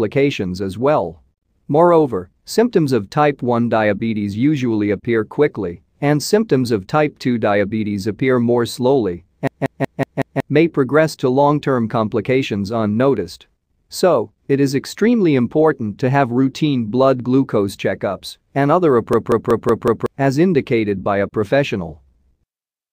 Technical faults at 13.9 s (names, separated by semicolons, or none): none